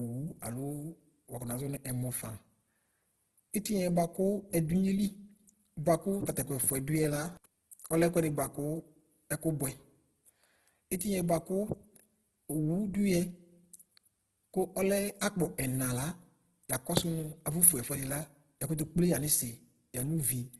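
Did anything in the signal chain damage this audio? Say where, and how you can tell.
Yes. Across the whole clip the speech is grainy and rough, with nothing above 12.2 kHz. That points to the codec stage, likely Opus in its CELT music mode at a very low rate near 12 kbps, filling starved bands with noise or folded copies.

Pre-echo at the codec stage occurs at 10.99 s: a brief hiss of about 13 ms leads a sharp attack, softening its onset. The transform block spread quantisation noise sized for the loud attack into the quiet moment just before it.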